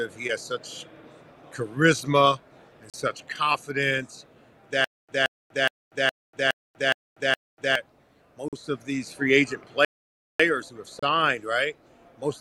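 At 2.90 to 2.94 s the sound drops out for 37 ms. It resumes with no audible repeat. This is a short Bluetooth stall. The likely cause is radio interference delaying packets to the headphones. Their small buffer emptied, so the output paused until the resent data arrived. The gap is brief but clean, a sharp hole in the audio. The same kind of dropout returns at 8.48 to 8.53 s, lasting 44 ms, and at 10.99 to 11.03 s, lasting 31 ms.

From 4.84 to 7.75 s comes a stutter with silent gaps. A fragment of 174 ms plays, then 242 ms of digital silence follows. The cycle repeats every 416 ms, seven times in all. The likely cause is a stalled stream that replayed its last fragment on each retry before running dry. It sounds like a stuck, pulsing loop. The audio meant for that stretch never plays.

From 9.85 to 10.40 s there is a playback stall of 547 ms. The sound stops in mid-flow and the output goes fully silent. 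The likely cause is the player running short of data, or its thread being blocked. This gap is far longer than the brief Bluetooth dropouts. It reads as a distinct halt, not a flicker.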